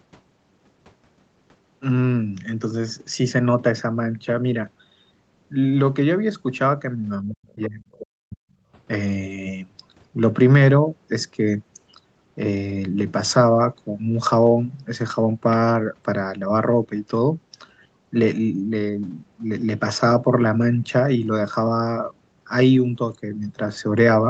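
Speech suppressed in double talk runs from 7.29 to 8.39 s. The talker's level drops sharply, by about 40 dB at its deepest, for roughly a second in total. The likely cause is an echo canceller that could not tell the near talker from loudspeaker echo while both sides spoke, so it turned everything down.

The other side's voice leaking through appears in two short scraps inside that stretch, at 7.53 to 7.67 s and 7.94 to 8.03 s. A faint second voice sits some 20 to 25 dB below the speech, likely where loudspeaker playback reached the microphone and the canceller left part of it behind.

Background gated by the echo canceller follows at 8.67 to 8.72 s. The room sound dips by about 9 dB for 50 ms as the canceller clamps the microphone during loudspeaker playback, then recovers as soon as it releases.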